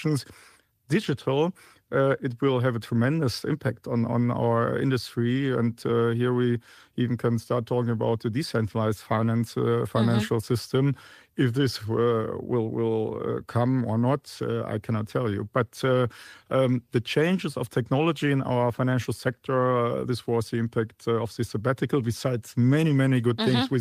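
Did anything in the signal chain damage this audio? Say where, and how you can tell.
No, nothing in the signal chain damaged this speech recording. Listening through, there is no sign of trouble at any stage from capture to playback.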